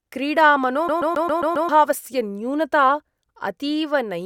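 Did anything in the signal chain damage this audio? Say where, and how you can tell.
Yes, at the playback stage: from 0.88 to 1.69 s the CD is stuck on one turn, replaying a 134 ms slice six times with a brief mute at each laser jump.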